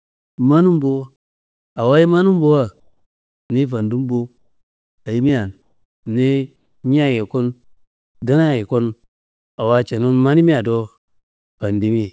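The sender's voice detector likely switched to discontinuous transmission in four pauses, so the receiver filled them with synthetic comfort noise in place of the background: 2.80 to 3.50 s, 5.62 to 6.06 s, 6.56 to 6.84 s, and 7.64 to 8.22 s. The real background, already very faint at about 57 dB below the loudest speech, gives way to a flat, textureless hiss. Its level drops by about 6, 3, 1 and 15 dB in turn.

At 8.2 s the detector was likely slow to register that speech had resumed. The first 20 ms of the sound were not sent and were covered by comfort noise, an onset clipped by the voice detector. The speech comes in abruptly, without its soft beginning. The speech throughout carries the G.722 call path's band limit, with nothing above 8 kHz.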